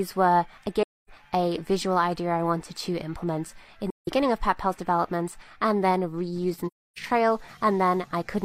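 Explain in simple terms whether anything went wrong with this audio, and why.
AAC frame loss with muting at 0.82, 3.89 and 6.67 s: chunks of the compressed audio went missing, so the player softly faded to silence for about 0.26, 0.17 and 0.30 s.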